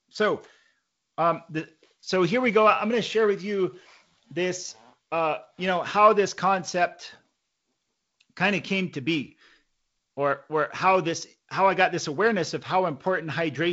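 Nothing stood out on listening to this speech clip.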